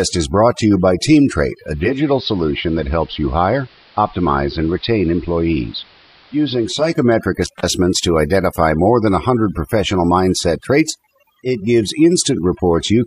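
Overdone noise removal runs the whole way through, gating bands near the noise floor, so the background twinkles. From 1.57 to 7.06 s there's digital radio blending to analogue: a half-second cross-fade onto AM, level down about 2 dB and hiss. At 7.42 to 7.68 s an intermittent contact opens for 162 ms, cutting the sound with crackly edges right before "to identify more than".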